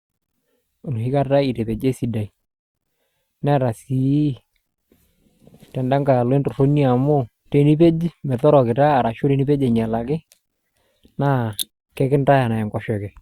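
No technical faults can be heard anywhere in the recording; the signal stays continuous and stable throughout.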